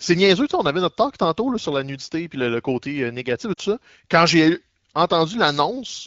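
From 3.53 to 3.60 s there are lost AMR speech frames: about 40 ms of speech failed decoding, which fits two 20 ms frames. The AMR wideband decoder bridges the gap by repeating its last pitch and vocal tract settings at falling gain, heard as a brief smeared, fading warble in the speech.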